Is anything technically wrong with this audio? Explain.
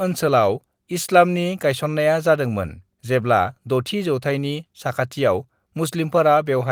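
No, the speech signal carries no audible technical faults.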